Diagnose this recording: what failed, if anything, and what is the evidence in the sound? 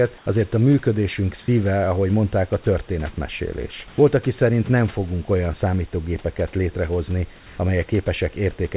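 In three pauses the room background briefly turns smooth and featureless: 0.18 to 0.26 s (80 ms), 3.88 to 3.98 s (100 ms, just before "aki szerint nem fogunk", about 4 dB different in level), and 7.36 to 7.58 s (220 ms, after "fogunk olyan számítógépeket létrehozni"). The real background sits about 27 to 31 dB below the loud passages. This is comfort noise in place of the background, likely from discontinuous transmission in the call processing: the sender went quiet and the receiver filled each gap with synthetic noise.

At 2.64 to 2.66 s, right after "szíve ahogy mondták a", the speech gives way to 20 ms of the same flat noise, and about 10 ms of the spoken sound is missing. This is likely sound dropped by the voice detector. The sender's detector classed a speech fragment as background and stopped transmitting, and comfort noise was played in its place until the detector triggered again. 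This fault is in the call-processing stage, in the same mechanism that produced the gaps above.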